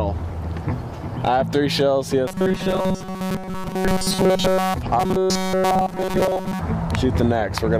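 Robotic sound from repeated short buffers affects the audio from 2.28 to 4.74 s and again from 5.00 to 6.61 s, where it turns into a rigid, metallic 188 Hz buzz. The likely cause is new data arriving too seldom, so a slice of about 5.3 ms is looped in its place. The first stretch is looped throughout and the second for most of its span. On a spectrogram this shows as evenly spaced horizontal harmonic lines at 188 Hz multiples, and the waveform shows identical short cycles repeating.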